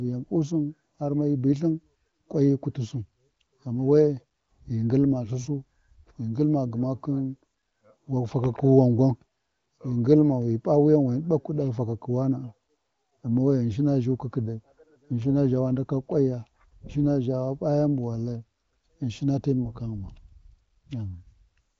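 Nothing stood out on listening to this speech, which comes through an AMR wideband (HD Voice) path with nothing above 7.6 kHz.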